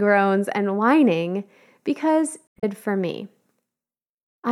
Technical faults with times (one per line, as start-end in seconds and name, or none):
2.47-2.64 damaged data in a compressed stream